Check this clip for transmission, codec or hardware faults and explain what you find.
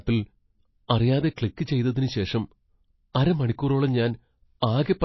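Two faults are present: plainly audible lossy-codec damage throughout this speech clip, and pre-echo before four sharp attacks.

MP3 compression runs the whole length. Nothing is left above 5.8 kHz, and the sound is dull and watery, with plainly audible swirling. The likely cause is a starved MP3 encoder cutting the treble and dropping weak frequency lines, which fits a low bitrate near 24 kbps.

Pre-echo appears at 0.88 s, 1.36 s, 1.56 s (just before "ചെയ്തതിന് ശേഷം") and 3.14 s. A short hiss leads each attack by 10 to 17 ms. The codec spreads noise across its block, filling the quiet just before the onset. Each attack sounds softened.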